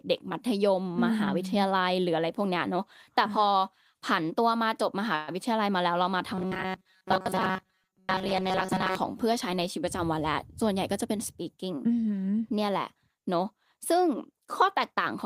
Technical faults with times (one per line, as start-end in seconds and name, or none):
5.15-5.30 call audio freeze
6.35-8.95 robotic sound from repeated short buffers
10.63-11.79 jitter buffer speed-up